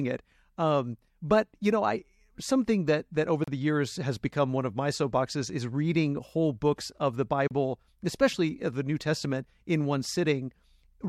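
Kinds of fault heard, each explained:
Gap at a join of encoded pieces: speech breaks into a silence of about 33 ms at 3.44 s and 7.48 s, four seconds apart, with smeared edges, then resumes where it stopped, because separately encoded segments were spliced without trimming encoder delay and padding.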